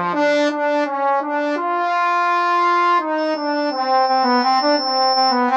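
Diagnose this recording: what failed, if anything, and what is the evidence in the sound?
What failed is the acoustic loop in the analogue stage, and you get a loudspeaker feedback squeal. Starting around 3.18 s a thin tone near 5.3 kHz creeps in and swells for about two seconds, finishing roughly 5 dB above the program before it drops out at 5.49 s. The mic is hearing the speaker it drives, and at that one frequency the round-trip gain tops unity, so the tone feeds itself and keeps climbing.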